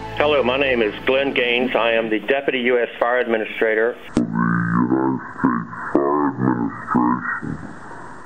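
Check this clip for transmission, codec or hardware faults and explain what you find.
There's one fault here: a section at the wrong speed from 4.08 s through to the end at 8.25 s. It plays at about 0.56 times normal speed, likely from playback on a mismatched clock, so everything drags and drops roughly ten semitones, sounding deep and sluggish.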